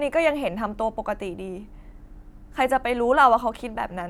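No technical faults are audible anywhere in the speech recording.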